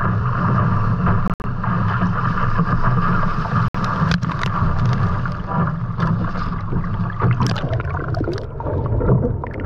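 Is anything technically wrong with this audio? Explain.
Yes, there are two short gaps consistent with a Bluetooth dropout. Around 1.28 to 1.44 s and again at 3.68 to 3.75 s, the audio likely arrived too late and was discarded. The sound cuts out abruptly (broken holes totalling about 100 ms in the first, a single 61 ms gap in the second) and resumes further along.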